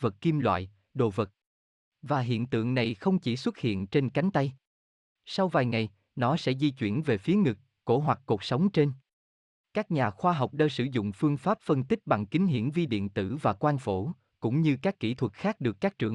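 No technical faults can be heard anywhere in this speech recording. Nothing interrupts or disturbs the audio at any point.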